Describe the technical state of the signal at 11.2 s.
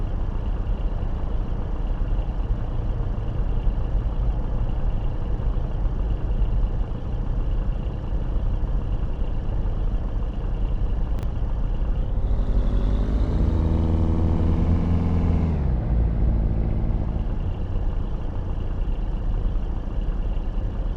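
A 10 ms chunk played three chunks late. These chunks out of order jumble 11.19 to 11.23 s into a brief garbled blip.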